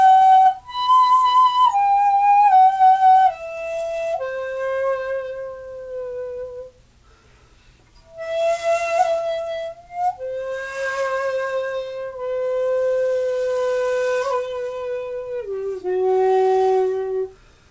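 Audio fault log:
No faults logged; the audio carries the expected G.722 call-path character at 64 kbps, with nothing above 8 kHz.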